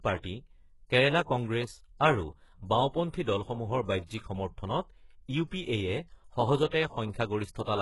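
HE-AAC compression runs through the whole of this speech recording, from start to finish. Nothing is present above 11.5 kHz, and the top of the spectrum sounds synthetic: the treble is gritty, with s sounds coming out metallic and lispy. That points to heavy damage at a very low bitrate, around 12 kbps, where the likely cause is spectral band replication copying lower bands upward, so the rebuilt harmonics no longer line up with the real ones.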